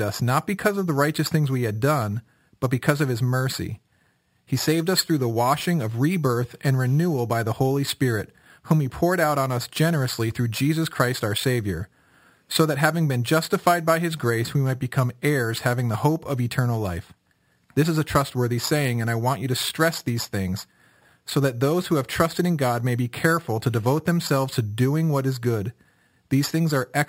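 Throughout the speech there is imaging from sample-and-hold upsampling. The rate was raised from 12 kHz to 48 kHz by simply repeating each sample four times with no smoothing filter, so mirrored copies of the speech spectrum sit above the original band. The first copy fills 6 to 12 kHz at about 18 dB below the speech, giving a bright metallic fizz that rises and falls with the speech. Unlike steady hiss, it vanishes with the sound, and its lowest copy moves opposite to the speech pitch.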